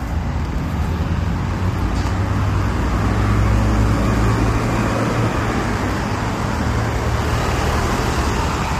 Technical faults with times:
0.00-8.79 low-delay AAC compression

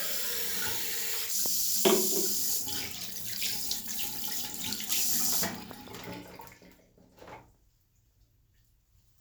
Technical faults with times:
1.46-1.48 loud pop
5.71-5.90 loud pop

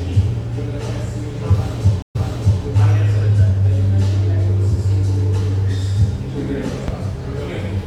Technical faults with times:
2.02-2.64 stream reconnect

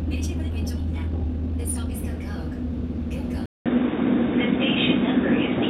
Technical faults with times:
0.00-1.94 time-stretched section
3.46-5.70 input switched to a poorer device

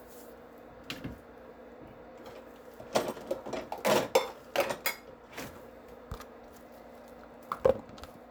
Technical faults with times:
none

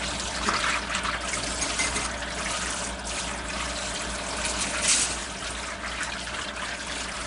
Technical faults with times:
0.00-7.27 Nellymoser compression

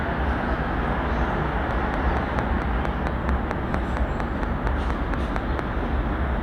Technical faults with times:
1.71-5.60 train of clicks

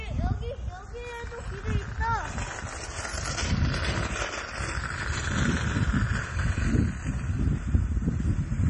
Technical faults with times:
0.00-8.69 MP3 compression

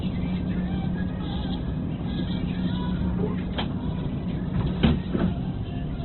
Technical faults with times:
0.00-6.04 Opus compression

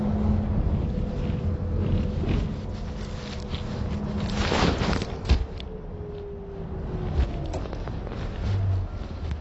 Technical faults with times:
0.00-9.41 AAC compression

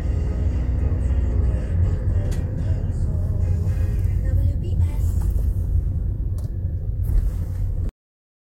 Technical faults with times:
7.89-8.45 cut-off end

